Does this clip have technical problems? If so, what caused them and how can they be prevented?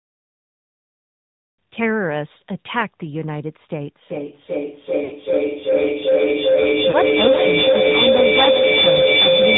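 Yes. The AMR narrowband mobile codec is present throughout. It cuts everything above 4 kHz and gives the speech a plainly buzzy, synthetic edge, consistent with a mid-rate mode near 10 kbps. Using a wideband codec or a higher-rate mode would prevent this.

A feedback howl builds from 4.09 s to the end. Two devices on the same call in one room re-amplify each other into a tone around 500 Hz, with the loop repeating roughly every 0.4 s, and the howl peaks about 6 dB above the speech. Keeping only one device unmuted per room prevents it.

Lost AMR speech frames occur at 5.04 to 5.13 s (60 ms) and 6.90 to 6.97 s (40 ms). The decoder bridges radio-corrupted frames by stretching the last good sound as it fades. A stronger signal or a more robust codec mode reduces these gaps.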